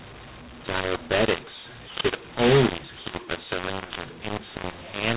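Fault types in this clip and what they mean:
mu-law and A-law mixed up: Throughout this speech, telephone samples coded on the A-law curve are being expanded with the mu-law curve, so every level lands in the wrong place: some too loud, some too soft, and the quietest codes pushed well above silence. The speech turns harsh and gritty and the pauses fill with noise. The telephone coding itself sounds normal, limited to 4 kHz, so this mismatch, not simple clipping, causes the distortion.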